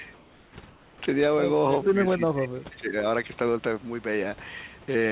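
From 0.14 to 0.56 s and again from 0.68 to 1.01 s, the real room background gives way to comfort noise in place of the background, likely because the sender's voice detector halted transmission and the receiver synthesised filler. The hiss turns steady and featureless, about 3 dB quieter in the first gap and about 10 dB quieter in the second. On a spectrogram, the textured background becomes a smooth, uniform band, its top edge still stopping at 4 kHz.

Between 1.85 and 2.96 s, speech is suppressed in double talk, likely because the echo canceller mistook overlapping far-end sound for echo and turned the talker down. For roughly a second of that stretch, the voice dips, falling by around 25 dB at its deepest. The waveform shows the envelope collapsing, and the spectrogram shows speech energy fading to near the noise floor.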